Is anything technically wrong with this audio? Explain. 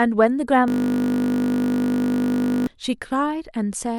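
Yes. A system hang loop runs from 0.68 to 2.67 s. The driver stalled while the hardware kept replaying the same 20 ms ring buffer, so one tiny slice of speech repeats exactly, roughly a hundred times, as a steady 50 Hz buzz.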